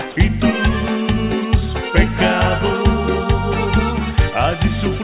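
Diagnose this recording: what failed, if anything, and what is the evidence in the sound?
Nothing failed: the signal is continuous and stable, and its content stops at 4 kHz, which fits a narrowband WebRTC call path, likely G.711 A-law at 64 kbps, working as designed.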